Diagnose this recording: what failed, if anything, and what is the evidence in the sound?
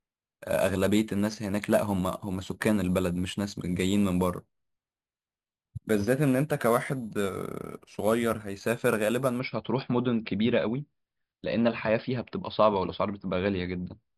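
The failure is imaging from sample-and-hold upsampling, in the rate-conversion stage. From 0.0 to 9.4 s the speech carries a bright, metallic fizz that rises and falls with its level. It sits about 20 dB below the speech. The lowest copy lies between 5.5 and 11 kHz and moves opposite to the pitch. The audio was raised from 11 kHz to 48 kHz by repeating each sample, with no smoothing filter. Mirrored spectra therefore sit around each multiple of 11 kHz.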